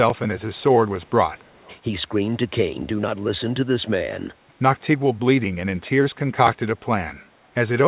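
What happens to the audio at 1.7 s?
A faint, delayed copy of the speech trails the original from 1.42 to 1.77 s, so 1.7 s falls inside it. The copy sits roughly a quarter of a second behind, about 235 ms, and is very quiet, well below the main speech. This is an echo leak, likely from a far end playing the call through a loudspeaker, where the echo canceller let some of what its microphone picked up pass back into the call.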